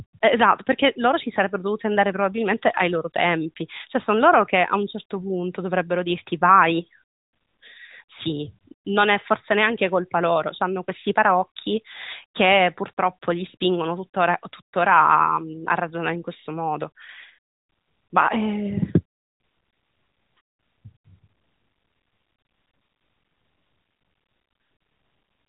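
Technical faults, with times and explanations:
No technical faults can be heard in this speech. It has passed through the AMR narrowband mobile codec, which suits a 12.2 kbps mode: nothing above 4 kHz comes through, and the codec's marks on the sound are light.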